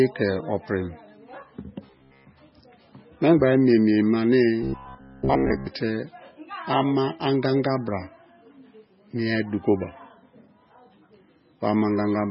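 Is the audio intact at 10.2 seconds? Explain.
No, at 10.2 seconds the speech has the watery, swirly sound of MP3 compression, heard throughout the clip and likely caused by it. Nothing remains above 5.6 kHz, and weak frequency lines flicker between frames, which fits a very low bitrate near 16 kbps.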